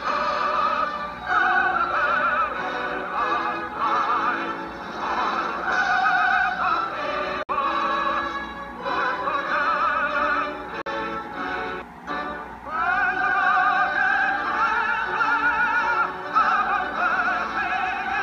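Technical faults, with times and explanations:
7.43 to 7.49 s and 10.82 to 10.86 s, Bluetooth dropouts. The sound cuts to silence twice, for about 58 ms and then about 44 ms. The edges are abrupt or fade over a few milliseconds. When the sound returns, it has moved on, as if it kept playing through the gap. This is likely a wireless link failing to deliver audio packets to the headphones in time. The lengths fit a few lost packets each time, roughly four and then three.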